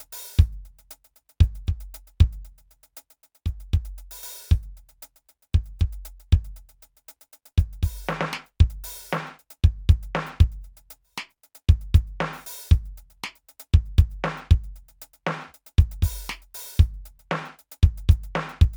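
A music clip, and nothing is technically wrong with it, so there are no times or causes to give.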